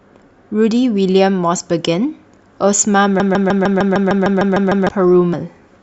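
From 3.2 s to 4.89 s, the speech stops moving forward and a single 152 ms fragment repeats back to back, eleven times in a row, with a mechanical stutter like a stuck record. This broken-record loop most likely comes from the player, encoder or stream stalling and resending the last piece it held. Whatever should have been heard during those 1.7 seconds never arrives.

At 5.33 s the audio jumps ahead, losing roughly 70 ms of speech. This is compressed frames skipped: a run of frames was missing or rejected as damaged by the decoder, and the gap fits about seven 10 ms frames.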